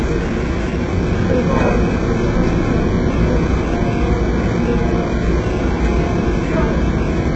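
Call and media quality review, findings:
HE-AAC compression, throughout: heavy damage, treble gritty and metallic, nothing above 8 kHz. Likely very low-bitrate HE-AAC encode, fits 8 kbps; spectral band replication copying lower bands upward.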